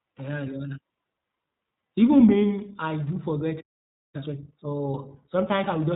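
From start to finish the speech carries iLBC codec damage, and it's plainly audible. Everything above 3.8 kHz is gone, so it sounds boxed-in and narrowband. Each 20 ms frame is coded on its own, which leaves a rough, slightly synthetic edge. That fits iLBC's 15.2 kbps mode.

At 3.60 s there's a playback stall. The speech just drops out mid-flow and stays silent until 4.15 s, a gap of about half a second. The likely cause is the player starving for data or its thread getting blocked, so there was briefly nothing to output.

Right after, from 4.15 to 4.67 s, you get time-compressed catch-up. The player clears the backlog by snipping out small pieces and cross-fading over the joins, running at 2x speed. The pitch holds steady, but it sounds rushed.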